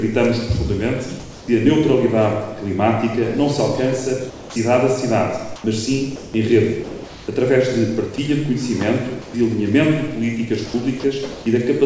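From 1.20 to 1.48 s the background turns steady, featureless and about 2 dB quieter. This is comfort noise in place of the background, likely from the sender stopping transmission while the receiver synthesises fill. At 4.30 to 4.56 s about 190 ms of sound gives way to that flat hiss. This is sound dropped by the voice detector, likely because it mistook quiet material for background. A brief flattening at 5.56 to 5.64 s, about 1 dB quieter, is again comfort noise replacing the real background, likely the same silence handling. At 6.16 to 6.34 s sound is lost once more, likely dropped by the voice detector. Synthetic noise then recurs through 7.28 s, about 620 ms in all, as comfort noise in place of the background, likely from repeated pauses in transmission. Short gaps at 8.16 to 8.18 s and 9.22 to 9.34 s cut out roughly 20 ms and 100 ms of sound, likely further drops by the voice detector. 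From 10.66 to 11.46 s the audio turns choppy, with two or more holes. This is sound chopped by the voice detector, likely switching transmission on and off repeatedly. Throughout, the call path's G.722 coding at 64 kbps leaves nothing above 8 kHz.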